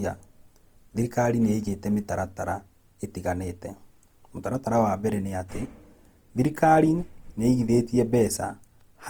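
Opus compression throughout: grainy, rough, noise-filled speech reaching about 20.2 kHz, likely from CELT-mode encoding near 24 kbps folding bands to fill spectral gaps.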